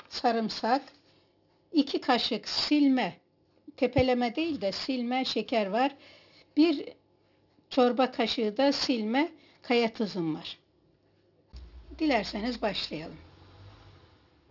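Across the whole clip the high end sounds gritty and metallic, with fairly strong stray tones sitting not far below the main sound and the spectrum packed hard up to 6 kHz. That is aliasing: content above 6 kHz folded back to wrong pitches, which fits a drop to a 12 kHz rate without an anti-aliasing filter.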